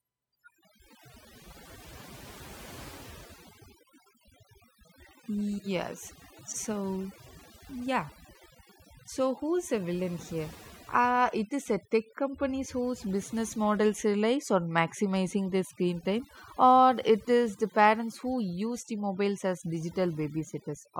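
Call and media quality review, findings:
USB whine, throughout: steady fixed-pitch tone at 1 kHz, strongest there, sitting about 35 dB under the speech. 1 ms USB frame current coupling via power or ground. Unlike mains hum, no 50/60 Hz base or low harmonics.

Overdone noise removal, throughout: background dropped and broken into twinkling specks. Denoiser set too strong, zeroing bands near its noise estimate and quiet speech detail with them. Unlike low-bitrate codec, artefacts track the noise floor.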